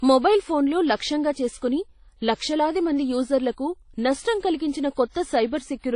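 Throughout the speech, the sound is ringing and washy, with a hiss that swells and fades along with the signal, and nothing is present above 10.1 kHz. The likely cause is WMA compression at a low bitrate, consistent with roughly 32 kbps: long transform blocks smear quantisation noise over tens of milliseconds, and weak spectral lines are discarded. A plain low-pass filter would dull the top without this breathing hiss and smeared ringing.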